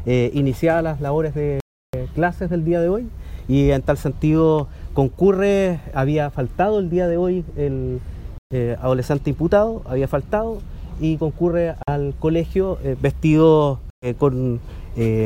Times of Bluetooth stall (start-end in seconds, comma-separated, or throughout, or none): 1.60-1.94, 8.38-8.51, 11.83-11.88, 13.90-14.07